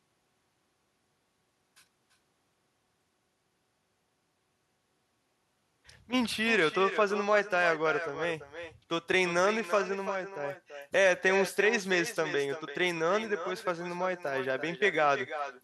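Speech with an echo and no canceller throughout. Each phrase returns roughly a third of a second later, about 11 dB quieter and thinner.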